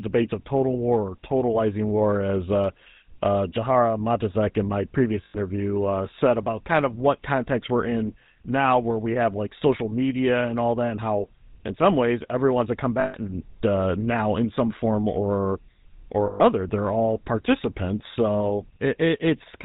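The speech has been through the GSM full-rate codec, whose regularly spaced pulse excitation keeps only part of the signal and discards everything above 4 kHz. The result is a plainly audible buzzy, gravelly roughness and a dull top end, which fits a 13 kbps full-rate coder.

Lost GSM frames occur at 5.24 s for about 100 ms, and at 13.0 s and 16.26 s for about 140 ms each. The decoder repeats the last good frame, so each gap becomes a brief, rough metallic ring.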